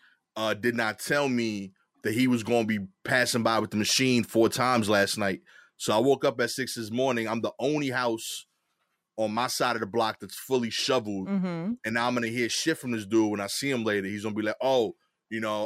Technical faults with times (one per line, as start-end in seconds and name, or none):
none